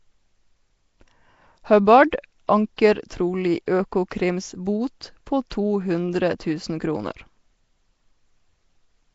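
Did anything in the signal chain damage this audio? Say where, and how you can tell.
Yes, the damage sits at the codec stage. The speech carries a rough, hissy halo and a smeared, underwater quality throughout, with nothing above 7.7 kHz. That points to likely Nellymoser compression at a rate that fits 32 kbps, with starved bands filled by noise.

The same codec produces pre-echo at 2.48 s and 5.50 s. A short hiss leads two sharp onsets by about 13 ms and 12 ms, and both attacks sound softened. Each block spreads noise sized for the loud attack into the quiet moment before it.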